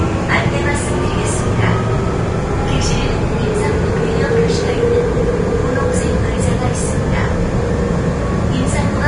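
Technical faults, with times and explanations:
Throughout, Vorbis compression: the audio was likely passed through a low-rate Vorbis encoder, with damage that fits around 32 kbps. Nothing survives above 10.6 kHz, and the coarsely quantised treble turns fine detail into hissy grain, roughening tones and blurring attacks.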